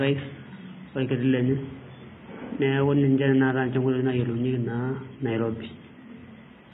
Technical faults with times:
0.00-6.73 HE-AAC compression

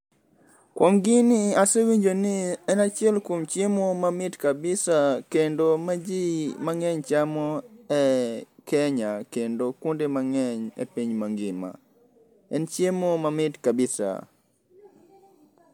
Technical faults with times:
none

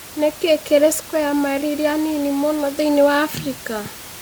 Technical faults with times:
none

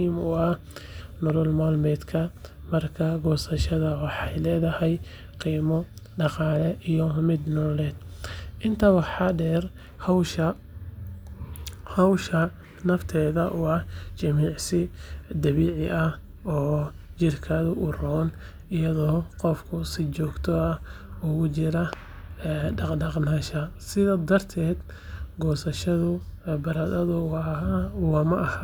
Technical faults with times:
1.30-1.32 loud pop
21.93-21.95 loud pop

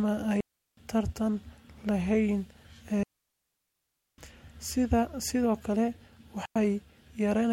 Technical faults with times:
0.40-0.77 digital wireless dropout
3.03-4.18 digital wireless dropout
6.45-6.56 digital wireless dropout

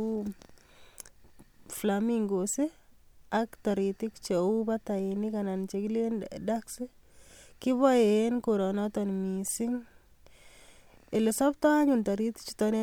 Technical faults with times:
none

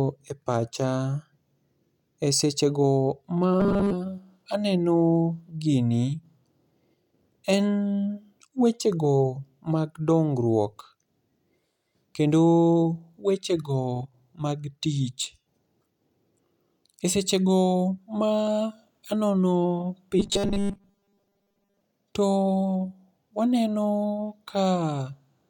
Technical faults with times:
3.60-3.93 robotic sound from repeated short buffers
20.19-21.80 robotic sound from repeated short buffers

